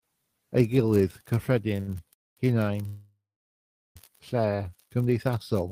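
At 1.80 s the speech hangs briefly. This is a short stall from a late packet. The packet arrived after its playout time, so the jitter buffer ran dry. The receiver stretched the last sound for 72 ms until data came in. Playback then resumed from the same point. Nothing is lost. The sound is simply held too long until 1.90 s, and everything after runs 72 ms later.

A call audio freeze follows from 2.14 to 2.39 s. Packets were likely held up in transit, emptying the buffer. The last sound is continued briefly and then gives way to silence for about 220 ms of the 230 ms filled. The audio resumes where it stopped. A longer call audio freeze runs from 2.87 to 3.97 s. About 1.09 s is filled, of which 760 ms is silence. No speech is missing. The freezes put gaps into the speech and add to the delay.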